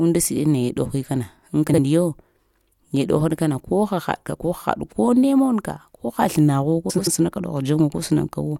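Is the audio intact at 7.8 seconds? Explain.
Yes, the audio is intact at 7.8 seconds, with no dropout, click, distortion or other fault audible at that moment.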